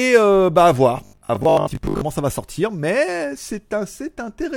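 Right after "euh bah à", at about 0.97 s, the speech collapses into a stiff, metallic drone that lasts until 2.05 s, just before "ça va sortir". That's robotic sound from repeated short buffers. The buzz sits at 50 Hz, which fits a 20 ms chunk being looped. The likely cause is audio arriving too slowly, so the player fills the gaps by repeating the last buffer. Roughly half of what you hear there is repeats, with the real audio skipped.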